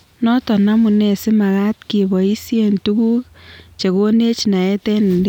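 No technical faults are audible.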